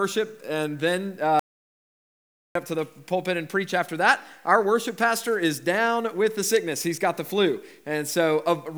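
At 1.39 s the sound stops dead and does not return until 2.55 s, leaving about 1.16 s of silence with no room tone underneath. It cuts out and comes back in mid-flow, so whatever happened during that stretch is simply missing. This is an audio dropout to silence, likely caused by the input being lost briefly while the recorder kept writing silence.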